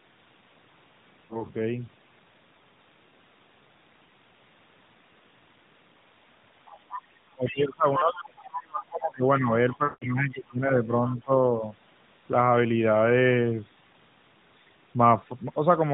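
Narrowband mobile speech with light AMR-NB coding (no audio above 4 kHz, consistent with the 12.2 kbps mode) has two bursts of lost AMR speech frames. At 1.26 to 1.45 s, 40 ms goes missing, which fits two frames, and the decoder briefly smears over it. At 9.84 to 10.06 s, a longer 180 ms gap, which points to about nine frames, stretches out and fades nearly to silence before the talker returns a bit rough. The other side's voice is leaking through at 6.66 to 7.61 s, at around 15 dB under the talker; 7.96 to 8.22 s, nearly as loud as the talker; and 9.36 to 10.35 and 11.10 to 11.21 s, both faint. The likely cause is the far end's loudspeaker sound getting past the echo canceller. Across 7.31 to 11.62 s there's also speech suppressed in double talk, with the talker's level pulled down in patches totalling around three seconds, at worst by roughly 25 dB, likely the echo canceller ducking everything while both sides talk.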